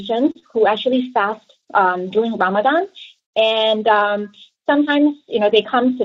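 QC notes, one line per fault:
0.31–0.37 s: short stall from a late packet. The jitter buffer ran dry, so the last sound was stretched about 36 ms until the packet arrived; nothing lost, delay grows.
0.39–0.44 s: short concealed packet loss. About 20 ms never reached the decoder; the receiver extended the preceding sound, giving a brief smear before blending back.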